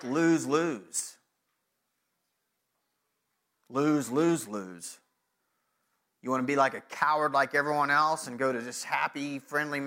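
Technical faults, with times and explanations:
No technical faults can be heard in this speech.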